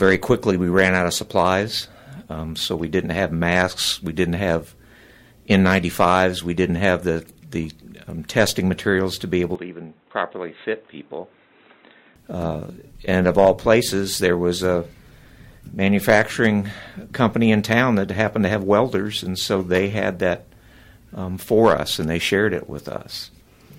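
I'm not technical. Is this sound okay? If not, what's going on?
No. From 9.55 to 12.16 s the sound turns dull and boxy, a bit quieter and noisier. The input likely switched to a poorer device, cutting everything above 3.9 kHz.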